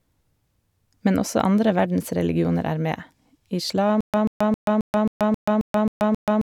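From 4.01 s to the end, a stutter with silent gaps: one 136 ms fragment repeats nine times, each followed by 131 ms of digital silence. Waveform and spectrogram show identical blocks between flat, empty stretches, likely a stalled stream replaying its last buffer.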